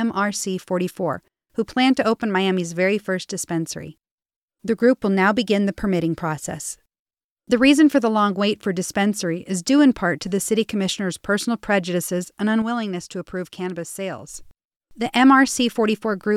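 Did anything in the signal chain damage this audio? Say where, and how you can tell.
Yes. A sudden gain jump hits the speech just after "commissioner's personal prejudices and": at 12.62 s the level drops abruptly by about 6 dB, then snaps back at 14.34 s. The background noise falls and recovers together with the speech, which points to a digital stage, likely a gain setting or a one-bit shift applied without a ramp. On the waveform the envelope steps down and up cleanly; a spectrogram shows the whole band dimming uniformly between those edges.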